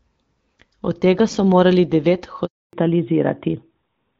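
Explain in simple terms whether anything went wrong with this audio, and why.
Around 2.45 s the speech just cuts out for about 280 ms, until 2.73 s. That's a handover gap: the phone was switching the call between networks, no speech got through during the swap, and whatever was said in that moment is simply gone.

Right after, from 2.73 s to the end, there's a fallback to narrowband. The call dropped out of HD Voice into an older phone codec, so everything above 4 kHz is stripped off and the speech sounds duller and flatter than before.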